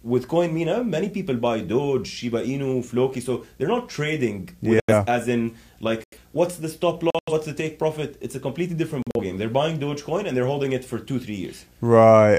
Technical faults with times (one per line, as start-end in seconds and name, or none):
0.00-12.39 video or display buzz
4.80-4.92 corrupt frame muted
6.03-6.18 corrupt frame muted
7.10-7.32 corrupt frame muted
9.02-9.20 corrupt frame muted